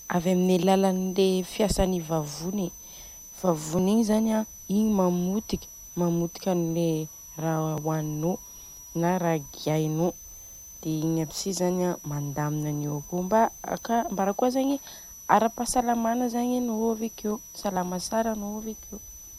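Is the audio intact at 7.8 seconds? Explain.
No. At 7.78 s there is an overlap between stream segments: two segments' timestamps collide, and the player trims what it takes as duplicated sound. About 19 milliseconds of real speech vanish at a join between 1-second segments. It is heard as a tiny click or skip. On the waveform it shows as an abrupt step discontinuity, and on the spectrogram as a thin vertical broadband line.

A switching supply whistle also runs through this moment. It is a steady high tone drifting between about 5.8 and 6.2 kHz, roughly 20 dB below the speech. It comes from a power supply's audible burst mode or beating. On a spectrogram it appears as a faint, slightly wavering horizontal line near 6 kHz.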